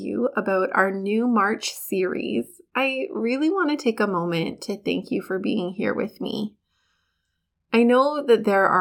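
Listening to this speech recording, nothing stood out as a technical problem.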